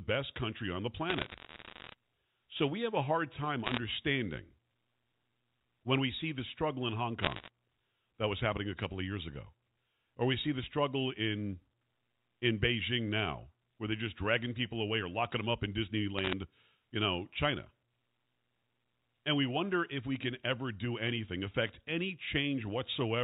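Speech over a G.711 A-law phone line, so everything stops at 4 kHz, with four bursts of bit errors on a digital phone line: 1.10 to 1.93 s, 3.64 to 3.78 s, 7.22 to 7.48 s and 16.19 to 16.33 s. Each flipped bit corrupts a single sample, and hits on a high-order or sign bit come through as sharp ticks that pile up into crackle over the speech. The error rate is around one percent or under, except the 3.64 s burst, which runs closer to one and a half.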